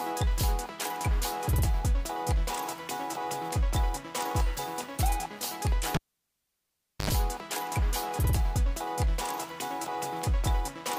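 A cable is pulled and plugged in between 5.95 and 7.10 seconds. A pop starts it. The signal then drops to near silence for about 1.1 seconds. As the plug goes back in, 81 ms of 50 Hz mains buzz leaks through the touching tip. A second pop brings the sound back.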